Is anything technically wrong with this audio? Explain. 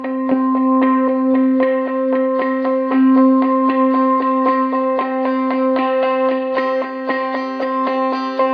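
No, nothing in this music stood out as a technical problem on listening.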